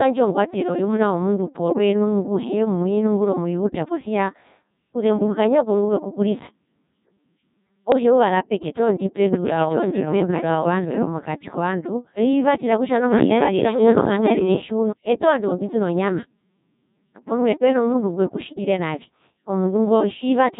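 Throughout, the speech passes through a Codec 2 vocoder, heavily degraded in a way that fits its 1.6 kbit/s mode. Only pitch, voicing, energy and a coarse spectral envelope survive, and the decoder rebuilds the voice from sine waves, so it sounds robotic and buzzy, with a smeared, synthetic tone.

From 1.69 to 1.78 s and again from 7.92 to 8.03 s, bit errors on digital voice radio corrupt the vocoder's parameters, with roughly 5 percent and then about 2 percent of bits flipped. Pitch, level and timbre lurch abruptly, producing brief bleeping, warbling gibberish.

From 9.33 to 14.91 s a doubled audio track appears, likely from the same signal being mixed in a second time through a slower path. A full-band copy about as loud as the original trails it by about a second, with no decay or room colour, and it starts and stops abruptly.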